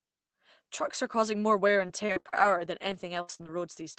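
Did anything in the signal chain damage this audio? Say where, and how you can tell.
Yes. From 1.67 to 3.47 s, right after "are causing more", the speech turns choppy and robotic, with short holes up to 64 ms long. This is repeated packet loss on the network: the jitter buffer patches each gap by extending the last sound, about 16% of that stretch.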